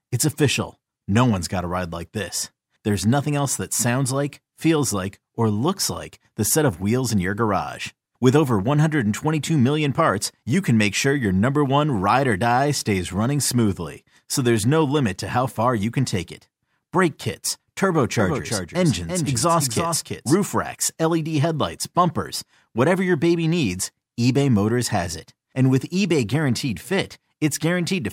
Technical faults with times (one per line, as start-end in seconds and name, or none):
18.20-20.36 doubled audio track